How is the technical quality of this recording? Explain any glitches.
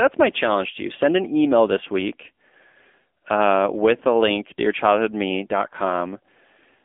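The technical quality is poor. It sounds like a phone call, with one fault running through the whole clip. This is the AMR narrowband mobile codec. The band sits roughly between 250 Hz and 3.5 kHz, and nothing comes through above 3.6 kHz. The codec rebuilds speech from a vocal-tract model excited by a few pulses per short subframe. At low rates that model is starved. The damage is plainly audible here, with a buzzy, synthetic edge, which fits a low mode near 8 kbps.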